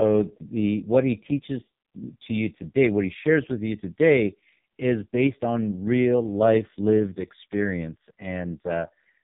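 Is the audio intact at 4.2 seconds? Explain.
No. At 4.2 seconds, as throughout the whole clip, the speech sounds buzzy, muffled and synthetic, with nothing above about 3.7 kHz. This is heavy AMR narrowband mobile codec damage: a vocal-tract model rebuilt from sparse pulses, squeezed to a very low rate that fits 4.75 kbps.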